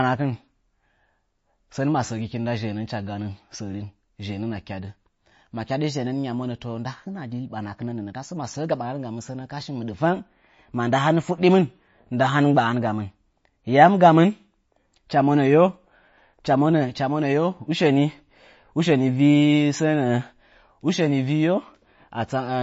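Throughout the speech, a watery, swirling texture and a hard cutoff near 7.6 kHz point to likely MP3 compression at a low bitrate; unlike plain low-pass filtering, weak detail flickers frame to frame.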